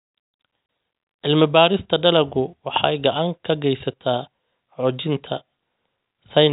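At 0.66 s the speech drops out for 30 ms, a gap that fits a single lost packet: packet loss filled with silence. The receiver inserted nothing, so the waveform falls flat to silence with abrupt edges, and a spectrogram shows a clean vertical blank band across the telephone-band G.711 audio.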